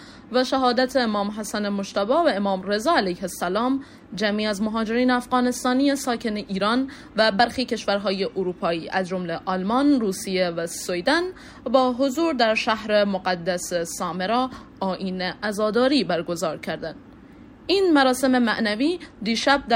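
No technical faults can be heard anywhere in the audio, and the signal stays intact and continuous throughout.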